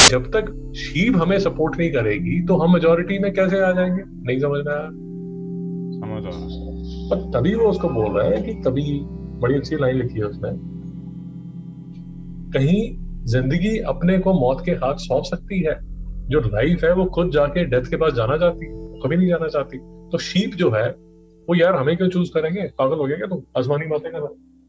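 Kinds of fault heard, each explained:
File tags played as audio: from 0.0 to 0.08 s, an embedded cover picture is read as if it were samples, and its compressed data comes out as a hard-edged burst of very loud white noise, a sudden blast of static opening the clip.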